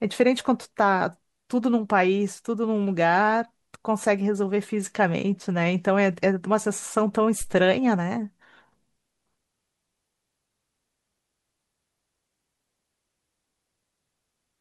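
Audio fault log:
7.41–7.61 s, phantom power thump: a single deep, low-frequency thump peaking at about −24 dBFS, lasting roughly 0.19 s and decaying in about 43 ms. A supply was switched on or off on a live input, and the abrupt DC step passed through the coupling capacitors. The capacitors can only pass a brief transient, so the step emerges as a short bass pulse that dies away quickly rather than as a sustained offset or click.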